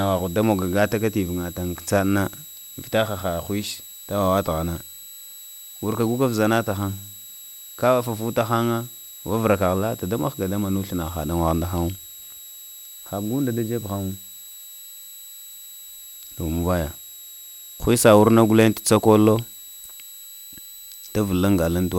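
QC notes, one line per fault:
Throughout, switching supply whistle: a thin high whistle sits under the speech, wandering between about 3.83 and 3.97 kHz and roughly 20 dB down. That's a switching power supply running in an audible burst mode or beating with another one, its rate shifting as the load changes.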